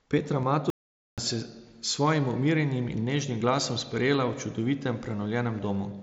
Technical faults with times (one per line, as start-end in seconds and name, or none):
0.42 concealed Bluetooth headset packet loss
0.70-1.18 audio dropout to silence
1.86 concealed Bluetooth headset packet loss